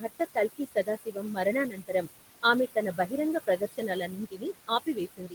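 Throughout the clip there are noise suppressor artifacts. The room noise is cut by about 19 dB between phrases and swells back under the speech.

The suppressor also causes speech cut by the noise suppressor, mistaking quiet speech for noise and turning it down. This happens from 0.0 to 1.38 s (roughly 0.4 s affected, dropping about 20 dB), 1.7 to 2.08 s (about 12 dB), 2.95 to 3.13 s (about 10 dB), and 3.47 s to the end (about 21 dB). Here the affected speech sounds swallowed, not just masked by noise.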